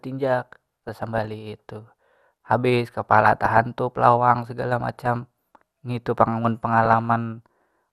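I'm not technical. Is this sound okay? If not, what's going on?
No. The speech has DAB burbling at 0.40 to 1.34 s, 3.04 to 3.60 s (just before "lawang segala"), 4.81 to 5.07 s (right after "lawang segala") and 6.84 to 7.07 s (after "ngitu pang amun"). It sounds like short blips of noise over the voice. Weak digital radio reception let errors slip past the receiver's error correction, so short blips of noise appeared in narrow slices of the sound's frequency range.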